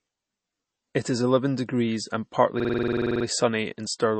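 Throughout the speech, nothing reaches above 8.3 kHz, and the sound has a plainly audible watery, swirling quality with smeared consonants. This is likely MP3 compression at a low bitrate, around 32 kbps, where the encoder truncates the treble and lets weak spectral lines flicker between frames.

From 2.60 to 3.25 s, just after "eleven degrees and partly", a system hang loop takes over. The system stalled while playback kept cycling one 46.44 ms segment, which fits a 2048-sample buffer. It repeats 14 times, giving a 21.5 Hz machine-gun stutter, and essentially no audio is skipped afterwards.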